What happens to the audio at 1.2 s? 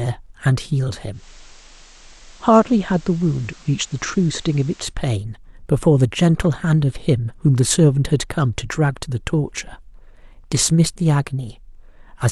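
At 1.2 s the speech is in a digital radio blend to analogue, lasting from 1.10 to 4.95 s: the receiver cross-fades over 192 ms to the station's FM broadcast, so hiss rises to roughly 25 dB below the voice and the level drops about 2 dB. The gradual fade and rising hiss set it apart from a dropout or codec muting.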